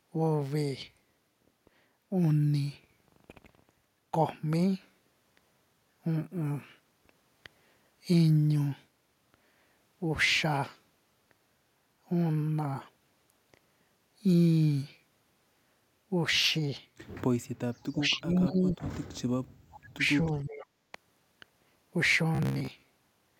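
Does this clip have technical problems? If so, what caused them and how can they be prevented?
Yes. From 17.9 to 18.78 s, 19.88 to 20.05 s and 20.23 to 20.69 s, the speech dips by about 20 dB, and by about 40 dB in the middle stretch. This is likely speech suppressed in double talk: the echo canceller confused overlapping talk with loudspeaker echo. Better double-talk detection or a headset prevents it.

At 19.72 to 19.79 s and 20.60 to 20.64 s, faint scraps of the voice return about 25 dB below the speech, 464 ms late. This is likely echo leak, where loudspeaker sound escaped the far end's echo canceller. Headphones or stronger echo cancellation there would stop it.

From 22.35 s to the end, the speech turns into a rigid, metallic buzz at 66.7 Hz. This is likely robotic sound from repeated short buffers: most of the audio is replaced by repeats of a slice about 15 ms long. A larger jitter buffer would prevent it.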